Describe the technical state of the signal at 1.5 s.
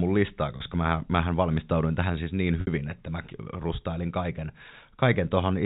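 At 1.5 s the speech is intact, with no fault present, only the expected telephone band limit of G.711 coding, which passes nothing above 4 kHz.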